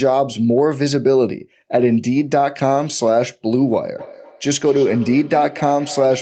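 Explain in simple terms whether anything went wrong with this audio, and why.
Something does go wrong near the end. From about 3.98 s to the end of the clip there's a feedback echo between two devices: two devices in the same room are on the call, one plays back what the other's microphone sent, and that microphone hears it again. Each echo canceller only removes its own device's sound, so the speech comes back roughly every fifth of a second, thinner and more ringing each time, though quieter than the speech itself.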